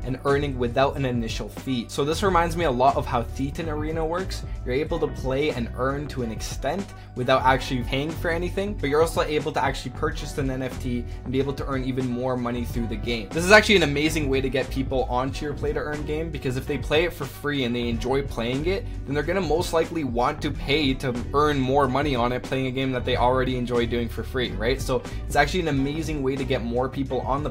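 A steady mains hum at 50 Hz runs from start to finish, sitting about 20 dB below the signal; its fixed pitch and harmonics distinguish it from broadband hiss.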